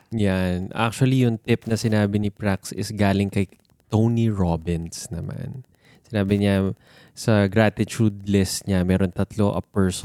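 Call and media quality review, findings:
Wi-Fi interference throughout speech clip. Steady ticking near ten per second, 102.4 ms period, matching a Wi-Fi beacon. Faint, roughly 40 dB below signal. Probable component: audio input circuit near a Wi-Fi radio, rectifying beacon bursts into audible clicks.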